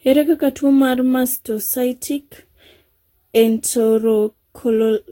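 Generation loss throughout: repeated lossy re-encoding, likely about seven passes, makes the speech swirly and hollow with blurred attacks and nothing above 16.6 kHz.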